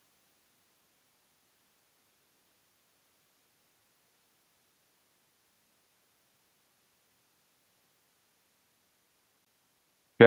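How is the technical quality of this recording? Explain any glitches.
The recording has two faults: a constant echo and one very short dropout.

Echo with no canceller runs throughout. The far end played the call on a loudspeaker. Its microphone picked that up, and nothing removed it. Your own voice therefore returns after the network round trip, around 0.4 s later. Here the returned copy sits about 87 dB below the speech. That is far too faint to hear. It would be a quieter, thinner shadow trailing each phrase.

At 9.45 s the sound cuts to silence for 16 ms, then resumes. The likely cause is a Bluetooth stall. Interference delayed packets to the headphones, and their buffer ran dry. Playback paused until resent packets arrived. At this length it is a very brief gap.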